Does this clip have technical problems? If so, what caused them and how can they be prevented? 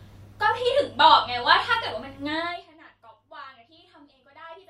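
Yes. Zipper noise, 2.34 to 2.7 s: the level drops about 25 dB in unsmoothed 1 dB steps, roughly fifty a second, each step leaving a small click. Interpolating the gain sample by sample, rather than jumping once per block, prevents it.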